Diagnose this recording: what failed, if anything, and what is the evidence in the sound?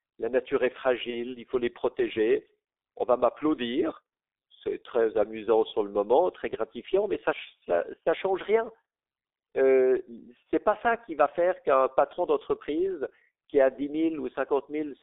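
The codec stage failed: the speech has gone through the G.723.1 codec, which shows throughout. The band runs only from about 300 Hz to 3.7 kHz, and at around 6.3 kbit/s the voice is heavily damaged: muffled, hoarse, with smeared consonants. A narrow telephone channel would be band-limited but clean. The roughness here comes from a coarse voice model refreshed only every 30 ms, so rapid articulation blurs.

The network stage also failed, with VoIP packet loss concealed by the speech codec at 1.10 to 1.38 s and at 10.53 s. In each spot the voice turns into a fading continuation of the preceding sound, which fits a single lost 30 ms frame. At 1.10 s the weakened, distorted voice lingers to 1.38 s as the decoder's state recovers. Unlike a dropout or click, no gap of silence appears. The decoder fills the hole by extrapolating pitch and filter.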